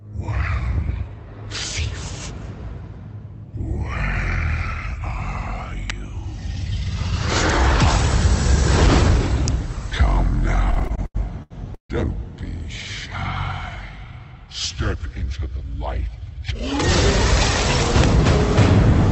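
At 5.90 s and again at 9.48 s, a sharp snap sits on top of the sound, likely an electrical switching spike from a nearby switch or motor arcing into the line. On a waveform each is a needle-thin spike. On a spectrogram it is a vertical stripe reaching up to the 8 kHz band edge of the Opus path.

From 10.71 to 11.91 s the audio shows repeated stalls (stutter). The stream stalls nine times, with the longest wait 150 ms. Each time, the receiver holds and repeats the last sound until fresh audio arrives, so about 0.4 s is stretched filler and nothing is lost. Spectrograms show smeared, repeated frames, and the waveform has faded, repetitive patches.

Between 13.98 and 15.65 s comes a jitter buffer speed-up. Short pitch-period pieces, about 0.2 s in total, are cut out in quick succession, so the sound runs at 111% speed at unchanged pitch and feels hurried. The spectrogram looks compressed in time, with the waveform's cycles subtly spliced together.

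At 18.04 s a third snap appears, again likely a switching spike, with the same isolated vertical stripe and waveform needle.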